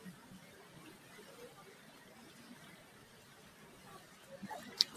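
A noise suppressor applied to music or sounds runs throughout: sustained tones and tails sink by around 5 dB while attacks mostly pass, so the audio pumps and thins. Unlike compressor pumping, the dips follow steadiness rather than loudness, fading held material regardless of level.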